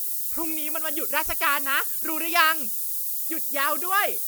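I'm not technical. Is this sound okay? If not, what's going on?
No. A steady, thin hiss runs under the speech for the whole clip, about as loud as the speech itself and strongest in the high end. This is low bit depth with noise shaping: very few levels, pointing to about 5 bits, with the rounding noise pushed upward.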